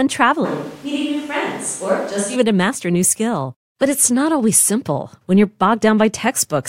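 From 0.46 to 2.35 s the close microphone's feed likely dropped out, forcing a switch to a distant microphone. The speech turns suddenly roomy, hollow and thin in the bass, about 5 dB quieter, with room noise only about 25 dB down, snapping back before "to master a new".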